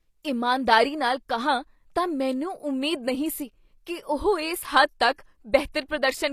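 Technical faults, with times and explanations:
Throughout, HE-AAC compression: s sounds are gritty and lispy, with treble likely rebuilt by spectral band replication, which fits a bitrate of about 24 kbps.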